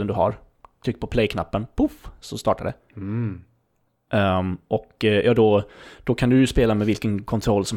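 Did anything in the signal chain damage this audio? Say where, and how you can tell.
No, nothing in the chain damaged it.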